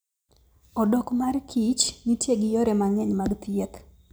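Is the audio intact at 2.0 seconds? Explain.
Yes, the speech at 2.0 seconds is intact, with no fault at that moment.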